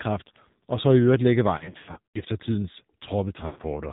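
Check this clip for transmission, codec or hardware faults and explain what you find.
Two faults are present: the speech has passed through the AMR narrowband mobile codec throughout, and lost AMR speech frames break it up twice.

For the whole clip, the AMR narrowband codec rebuilds the speech from a vocal-tract model at 8 kHz sampling, so nothing above 4 kHz survives. At a low bit rate, plainly audible here and consistent with the 7.4 kbps mode, the speech sounds muffled, buzzy and synthetic.

From 1.58 to 2.21 s, frames failed their error check and the decoder filled them by repeating the last good pitch and vocal-tract settings at falling gain. About 340 ms went missing across 560 ms, in runs of up to 100 ms, so the speech warbles, smears and dips repeatedly. From 3.46 to 3.61 s, 120 ms of lost AMR speech frames break the speech up again before it returns.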